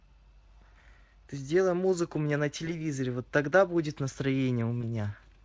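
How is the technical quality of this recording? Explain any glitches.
Two brief glitches break up the speech, at 2.65–2.71 s and 4.81–4.84 s. Each sounds like a short buzzy or noisy smear that briefly weakens the voice. This is VoIP packet loss concealed by the speech codec: a single 20 ms packet went missing each time, and the decoder filled the gap by extrapolating the previous pitch and filter at reduced gain, so the voice stays a little thin just after the gap. The underlying Speex coding, which fits a fairly high setting around 28 kbps, adds only light hoarseness.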